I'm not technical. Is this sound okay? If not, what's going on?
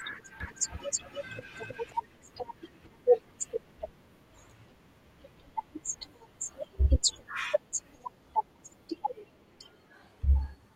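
No, there's a problem near the start. From 0.40 to 1.92 s you get a doubled audio track: the same speech plays twice, with a second copy trailing about a third of a second behind and roughly as loud as the first, so it sounds like a stutter rather than a natural echo. It switches on and off abruptly. The likely cause is the audio being picked up a second time through a slower route, or an edit that left two copies slightly out of step.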